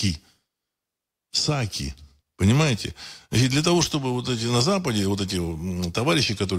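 No technical faults can be heard anywhere in the recording, and the signal holds steady all the way through.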